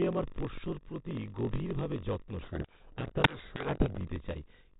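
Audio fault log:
throughout block size mismatch (padded): A steady buzz at about 46.9 Hz runs under the speech, and everything plays slightly slow, at 0.938 times normal speed but near its usual pitch. One stage delivers blocks a little shorter than the 1024 samples the next stage reads, which fits roughly 960 samples written per block at 48 kHz. The shortfall in each block is filled with zeros, so a tiny silent gap recurs at the block rate, producing the buzz and stretching the timing.
2.42–4.07 s codec payload misread: From 2.42 s to 4.07 s the speech is buried in harsh, grinding distortion, then abruptly returns to normal decoding. Here the G.726 code words arrive with their bit order reversed relative to what the decoder expects. Each 4-bit difference value is therefore read wrongly, and the adaptive predictor follows these false steps into rasping error. Outside this span the 32 kbit/s G.726 coding leaves only light, band-limited colouring.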